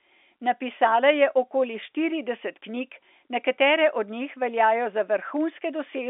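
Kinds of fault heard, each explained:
Nothing stood out on listening to this speech beyond the narrow telephone band of its G.711 line, with nothing above about 3.7 kHz.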